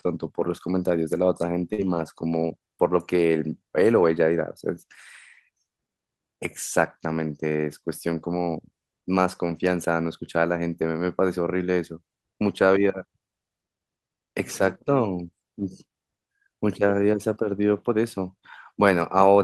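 At 1.73 s the sound briefly freezes into a held, fading smear for about 46 ms, then jumps ahead with roughly 40 ms missing. This is a burst of packet loss: consecutive packets never arrived, so the receiver stretched and faded the last audio before resuming later.

From 1.78 to 2.04 s, across about 140 ms, the audio turns grainy and noisier without dropping out. The same roughness returns for about 40 ms at 12.47 to 12.53 s and at 16.77 to 16.83 s. Each is a lost packet rebuilt from error correction, where the decoder played the low-bitrate backup copies carried in later packets.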